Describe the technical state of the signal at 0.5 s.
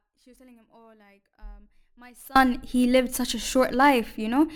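At 0.5 s the signal is in an audio dropout to a faint residue, running from the clip's start to 2.36 s. Only a faint leak about 30 dB down remains, likely from a lost upstream feed on a live path, before "he lived such a" cuts in abruptly.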